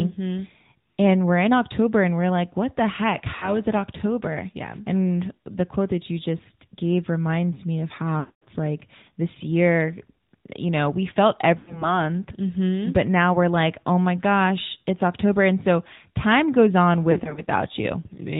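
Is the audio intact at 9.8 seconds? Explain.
No. Throughout the clip, including 9.8 seconds, the AMR narrowband mobile codec strips everything above 4 kHz and rebuilds speech from a sparse vocal-tract model, leaving it muffled and noticeably buzzy, which fits a mid-range rate around 10 kbps.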